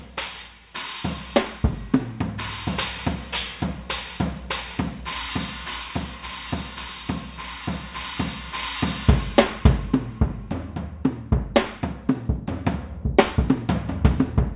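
No technical faults can be heard anywhere in the recording, and the signal holds steady throughout.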